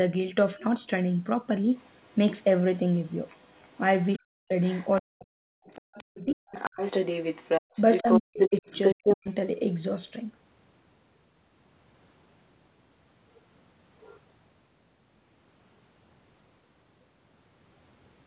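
A second, fainter voice sits under the speech from 1.76 to 2.44 s and 2.95 to 3.78 s, well below the main talker, then returns louder from 4.62 to 4.98 s and, from 5.7 to 9.16 s, at roughly the same level as the speech itself. This is other side's voice leaking through, likely because the far end played from a loudspeaker into the talker's microphone and the echo canceller left part of it in place.

Around those stretches the main speech is pulled down in pieces, from 4.15 to 4.54 s, 5.0 to 6.47 s and 8.02 to 9.28 s, with dips of around 40 dB that make it duck and break up. This is speech suppressed in double talk. When both sides spoke at once, the canceller likely could not tell the local talker from the echo and attenuated everything.

From 7.62 to 7.73 s, about 100 ms, the room sound itself drops out by about 37 dB and then comes back. That is background gated by the echo canceller: while the loudspeaker was active, it clamped the microphone hard for a moment before releasing.

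All of this rides on a narrowband G.711 call path with no content above 4 kHz.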